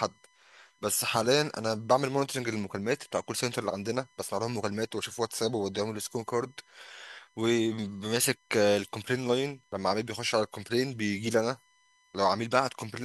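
Current drawn by the USB bus in 1 ms frames leaks into the audio path through power or ground, producing a USB whine throughout the speech: a steady fixed-pitch tone at 1 kHz, strongest at its 2 kHz harmonic, sitting roughly 40 dB below the signal.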